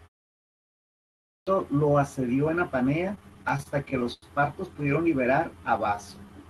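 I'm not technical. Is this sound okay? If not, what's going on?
No. There are three separate problems.

At 1.01 s, after about a second of silence, the sound jumps in abruptly just before "lo asedió en". This is a clipped start after a pause. The playback device had gone idle during the quiet stretch and needed time to wake up, so roughly the first half-second of speech, about 0.46 s, was swallowed. In this case, real sound is actually missing.

From 3.15 to 4.25 s the speech hiccups over and over. These are repeated stalls (stutter). The audio arrived late across the call, and each time the player ran out, it stretched the last bit of sound to cover the wait. The longest wait was about 0.09 s, and about a fifth of that stretch is filler. Nothing is lost, but the speech comes out choppy and halting.

From 5.46 to 6.26 s the speech drags smoothly instead of hitching. This is a jitter buffer slow-down. 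The player was rebuilding its safety reserve by quietly repeating tiny slices of sound, which added about 0.11 s and ran the speech at about 87% of normal speed. Unlike a slowed-down recording, the pitch stays the same, and unlike the stutter, there are no breaks, only drawn-out sounds.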